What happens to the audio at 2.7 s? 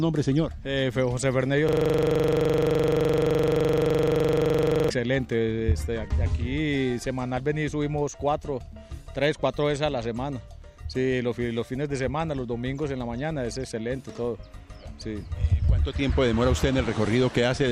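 At 2.7 s the sound is caught in a system hang loop running from 1.69 to 4.90 s. A 42.67 ms slice, which fits a 2048-sample buffer, repeats exactly 75 times, giving a rigid 23.4 Hz buzzing stutter. Unlike a dropout, the sound never goes silent, and every pass is identical.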